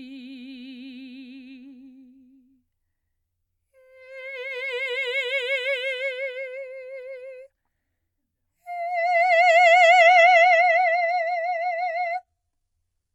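At 10.02 s the music abruptly switches to an adaptive stream at a lower bitrate, lasting until 13.15 s. The top end now stops near 11.8 kHz, which suggests a jump from a fairly high AAC rate to a very low-rate HE-AAC version after the connection slowed. Unlike a rebuffering stall, the music never pauses, and unlike a simple treble cut, the artefacts rise along with the bandwidth loss.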